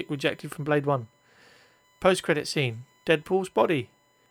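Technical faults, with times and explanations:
Throughout, USB whine: a steady 1 kHz tone sits about 40 dB below the speech. Current drawn in 1 ms bus frames leaks into the audio through power or ground.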